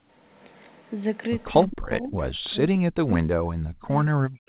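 A speech recording that passed through a call connection, with its spectrum ending sharply at 4 kHz, which points to G.711 mu-law at 64 kbps. From 1.5 to 2.19 s the speech level repeatedly sinks, at its deepest by about 30 dB and for around half a second in total. On a waveform the envelope pinches into gaps. The spectrogram shows the bands fading in blocks rather than tapering off naturally. This is speech suppressed in double talk: the canceller was likely unable to separate the local talker from loudspeaker echo while both sides spoke, so it attenuated everything. From 2.35 s to the end the same suppression returns more severely, with dips of about 40 dB that leave the trace close to flat and the spectrogram almost empty in places. Between 1.72 and 1.77 s there is a brief echo leak. A faint copy of the speech arrives 171 ms late, about 15 dB below the direct sound, and it likely slipped past an incompletely converged echo canceller. 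On a spectrogram it looks like a weak, time-shifted ghost of the preceding harmonic pattern.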